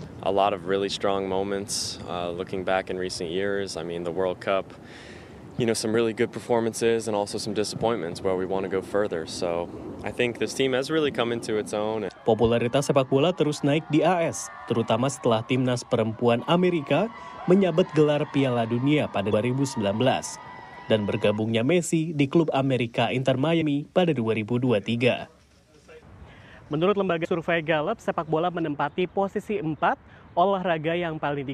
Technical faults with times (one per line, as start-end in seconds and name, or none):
19.29-19.34 damaged data in a compressed stream
23.58-23.62 damaged data in a compressed stream
27.24 damaged data in a compressed stream